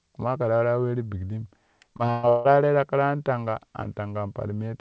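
From 1.94 to 2.47 s, packets were lost or arrived late again and again. That is repeated packet loss, with about four holes in quick succession, the longest 156 ms. The receiver covered each hole by stretching out the last sound it had, so roughly 58% of that half-second is concealment. The result is choppy, robotic speech with pieces missing, heard over a call path whose top stops at 8 kHz, which fits a wideband codec such as G.722.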